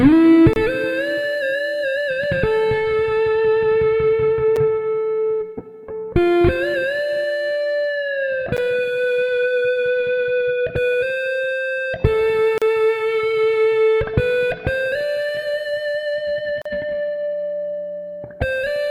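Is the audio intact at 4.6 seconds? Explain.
No. At 4.56 s there is a gap between stream segments: the timestamps of two adjoining segments leave about 6 ms uncovered, and the player pads it with silence. It is a brief, hard-edged dropout. On a waveform it is a flat, near-silent notch, and on a spectrogram a thin vertical blank stripe with abrupt edges. No audio is lost.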